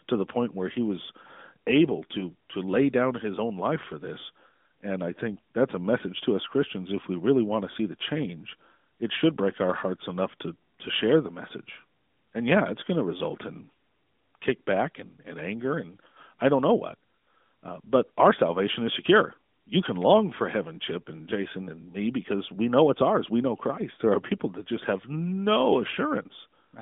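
Nothing stood out as a fault on listening to this speech, which comes through the narrowband mobile codec path with its expected band limit, nothing above about 3.7 kHz.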